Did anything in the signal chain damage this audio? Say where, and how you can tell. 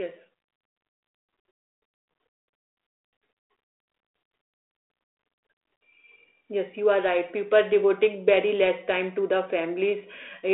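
No, nothing in the chain damaged this speech. It comes through a G.726 ADPCM link at 32 kbit/s, so it has the narrow telephone band of roughly 300 Hz to 3.5 kHz, nothing above about 3.8 kHz, and only a light coding texture riding on the voice.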